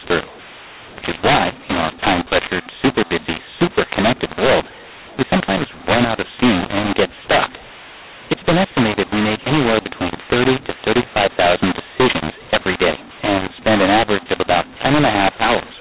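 From the first second to the end, the speech was encoded as A-law but decoded as mu-law, so mu-law and A-law are mixed up. Each 8-bit code maps to the wrong level, scrambling loudness: speech sounds harsh and distorted, and pauses fill with hiss.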